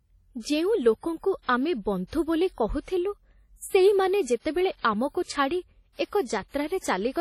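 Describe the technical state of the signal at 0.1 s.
At 0.1 s the speech carries heavy ringing, washy smearing and a hiss that breathes with the signal, running through the whole clip, with nothing above 18.3 kHz. This points to likely WMA compression at a low bitrate near 32 kbps: long transform blocks spread quantisation noise over tens of milliseconds, unlike the shorter pre-echo of MP3.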